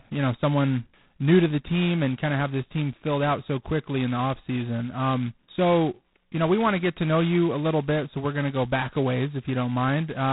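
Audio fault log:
throughout G.726 ADPCM: the speech carries a harsh, rasping hiss that rises and falls with its level, and nothing reaches above 3.9 kHz. The codec sends only the difference between each sample and an adaptive prediction, using very few bits. The coarse quantisation error therefore tracks the signal instead of sitting at a fixed floor. The heavy damage fits the codec's lowest 16 kbit/s mode, two bits per sample.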